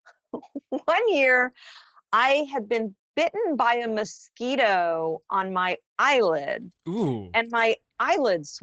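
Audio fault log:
Throughout: Opus voice compression. The speech sounds muffled, hoarse and faintly robotic, with clearly audible codec damage. Nothing above about 8 kHz survives, which points to Opus running its SILK linear-prediction coder in wideband mode at a low bitrate, around 12 kbps. At that rate the excitation signal is quantised coarsely, so breathiness and fine harmonic detail are lost and the voice takes on a buzzy, synthetic edge.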